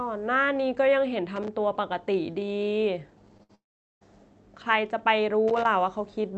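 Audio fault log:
1.36–1.48 s and 5.48–5.66 s: loose connector crackle. Irregular bursts of scratchy crackle as a worn contact makes and breaks, chopping the signal.
3.37–3.41 s: short concealed packet loss. About 20 ms of audio failed to arrive. The receiver bridged it by extending the preceding sound, heard as a brief smear before blending back.
3.43–3.51 s: burst of packet loss. About 60 ms of consecutive audio is missing. The extended sound fades as a held buzz or hiss, then audio resumes further on.
3.55–4.03 s: long network dropout. The sound briefly continues as a fading buzz or hiss, then about 410 ms of silence follows before audio returns. In all, 460 ms is lost, likely because no packets were arriving.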